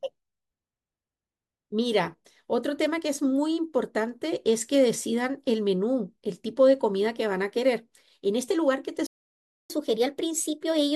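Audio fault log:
9.07–9.70 s, playback stall: The speech cuts out abruptly mid-flow and the output goes completely silent for about 0.63 s, long enough to register as a hard gap rather than a natural pause. Then the sound resumes where it left off. The likely cause is the player starving for data or having its audio thread blocked, so nothing reached the output until it recovered and refilled its buffer.
9.70–10.95 s, catch-up at higher speed: Right after the gap, the speech runs noticeably quicker and sits higher, roughly a semitone and a half above its normal pitch, and stays that way to the end of the clip. The player is draining its accumulated backlog by resampling at 1.1 times normal speed. Because resampling shifts timing and frequency together, tempo and pitch rise as one until the lost time is recovered.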